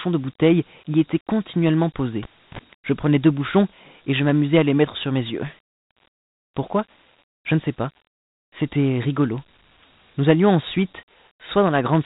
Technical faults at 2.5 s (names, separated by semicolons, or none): Dialogic VOX ADPCM; cable pulled and plugged in